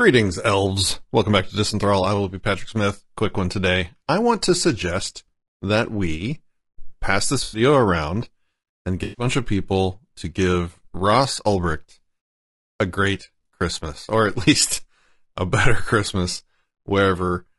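Throughout, the speech sounds rough and grainy, with noise between harmonics and a thin, synthetic top band, likely from low-delay AAC (AAC-ELD) compression at a low bitrate, consistent with about 32 kbps. From 2.15 to 2.18 s a tiny slice stutters, repeating three extra times with hard joins. This is a repeated buffer, consistent with a 10 ms buffer replayed. At 7.43 to 7.61 s and again at 9.03 to 9.25 s, smeared, noisy, phasey patches cover about 100 ms and 140 ms. This is AAC frame loss with concealment, where the decoder rebuilds the missing audio from the last good spectrum.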